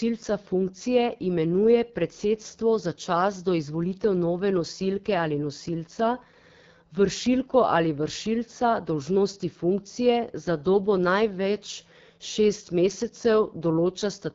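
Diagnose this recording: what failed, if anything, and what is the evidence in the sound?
The fault is at the codec stage, throughout the speech. It is AMR wideband (HD Voice) coding. Nothing sounds above about 7.3 kHz. The voice is plainly rough and raspy, which fits one of the lowest AMR-WB rates, near 8.85 kbit/s. Its pulse-driven vocal tract model cannot follow the voice closely at that rate.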